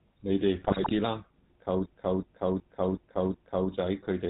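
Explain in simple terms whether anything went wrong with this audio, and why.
The whole recording passed through the GSM full-rate codec, an early mobile-phone system that rebuilds speech from a rough model of the voice and discards everything above 4 kHz. Throughout, speech sounds plainly buzzy, gravelly and muffled.

From 0.60 to 0.92 s, GSM bit errors corrupted the data reaching the decoder, as on a weak phone signal. The settings that shape the sound came out wrong for a stretch of frames, so the speech breaks into squawks, pops and gargling.

From 1.86 to 3.72 s there is a system hang loop. The computer froze while the sound hardware kept replaying the same stored chunk, about 0.37 s long. That piece repeats exactly five times, making a stuttering, stuck-record effect about 2.7 times per second.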